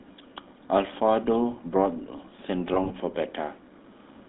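Throughout, the speech carries the buzzy, gravelly roughness of the GSM full-rate codec, which fits a 13 kbps coder, confined to a 150 Hz to 3.7 kHz line band. Between 2.74 and 2.92 s, lost GSM frames, about 60 ms in short scattered gaps, are concealed by repeating the previous frame, giving brief metallic, ringing smears.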